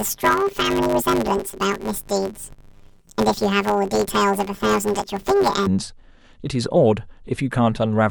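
From the start to about 5.68 s, the speech has a planar-as-interleaved fault: 10 ms blocks holding left-then-right samples get read as alternating pairs, so each half plays at double speed. With blocks this short, you hear a robotic 100 Hz buzz rather than an octave jump.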